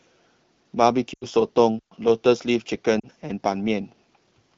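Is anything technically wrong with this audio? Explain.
Yes. The speech carries three short faults, heard through the light, clear coding of the AMR wideband (HD Voice) codec.

At 1.13 to 1.26 s and again at 2.99 to 3.07 s, the speech briefly fades to near silence, then returns weak or rough for a moment. These are lost AMR speech frames. Corrupted frames failed their checks, so the decoder repeated earlier pitch and vocal tract settings with fading gain. The gaps, about 80 ms and 40 ms, fit four and two 20 ms frames.

From 1.79 to 1.92 s there is a clean hole of near silence, about 127 ms long, with no noise burst around it. This is a digital wireless dropout: the link lost too much data, so the receiver muted with a very short fade.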